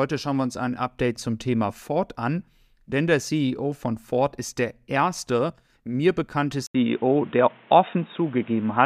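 Right after "der erste mir bekannte", at about 6.66 s, the sound drops out for around 80 ms and comes back duller and boxier, with nothing above about 3.8 kHz, a level shift of roughly 5 dB, and a new background noise sitting roughly 30 dB under the speech. It stays that way to the end. That pattern points to the input likely switching to a poorer device mid-recording, such as another mic or a headset's call profile.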